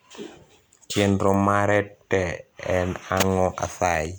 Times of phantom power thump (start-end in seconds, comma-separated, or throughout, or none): none